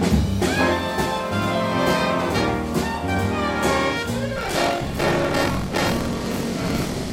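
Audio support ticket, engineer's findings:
Robotic buzz/rattle at about 43 Hz from 4.34 s to end of clip. Buffer tearing: writer and hardware read pointer slipped in the ring buffer, so about a third of each period replays audio around 50 ms old, with hard joins. Rate fits a 1024-sample buffer.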